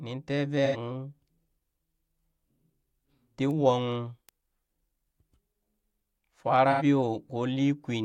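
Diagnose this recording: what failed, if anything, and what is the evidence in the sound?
The codec stage dropped AAC frames, and the decoder concealed the loss (AAC frame loss with concealment), smearing 0.65–0.77 s and 6.71–6.83 s into brief phasey, noisy patches; each gap of about 85 ms fits two lost frames.

A digital-path bit error spike flipped single samples at 3.51 s and 4.29 s, each heard as one sharp broadband tick unrelated to the speech.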